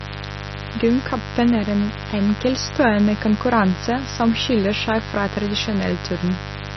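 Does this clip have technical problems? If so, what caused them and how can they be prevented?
Yes. Mains buzz runs through the whole clip. A dimmer, rectifier or unshielded cable in the recording chain let sharp switching spikes from the 50 Hz supply into the signal, two in every mains cycle. Because the spikes are so abrupt, they carry a dense stack of 50 Hz harmonics that climb up to several kilohertz. The result is a steady, raspy buzz sitting only roughly 10 dB below the speech. To prevent it, use shielded, balanced cabling and keep the signal path away from dimmers and switching power supplies.

The clip also has heavy coding damage throughout, most likely from MP3 compression at a very low bitrate, around 30 kbps judging by the sound. With so few bits, the encoder drops weaker frequency components from frame to frame and cuts the treble entirely. Nothing remains above about 5.9 kHz. 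The speech sounds dull, watery and swirly, s sounds turn metallic, and consonant attacks smear. To prevent it, keep the recording uncompressed or encode it at a much higher bitrate.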